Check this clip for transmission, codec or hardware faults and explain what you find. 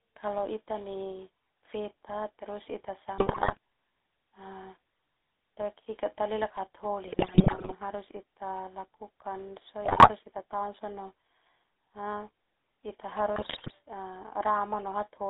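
The whole clip carries GSM full-rate codec damage, plus four bursts of GSM bit errors.

Throughout, the GSM full-rate codec rebuilds speech from a vocal-tract filter driven by sparse pulses, band-limited to 300 Hz–3.7 kHz, so it sounds buzzy and gravelly.

GSM bit errors hit at 3.18–3.57 s, 7.06–7.73 s, 9.84–10.1 s and 13.36–13.72 s: corrupted filter, pitch or gain values distort frames into squawks, pops and gargling.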